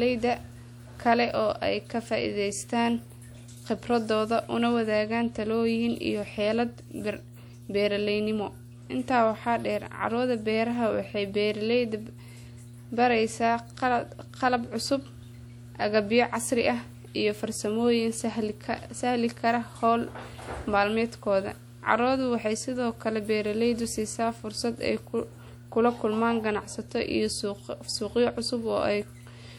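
A steady 60 Hz tone with low harmonics runs beneath the speech from start to finish, roughly 20 dB down: mains hum from a ground loop or nearby transformer.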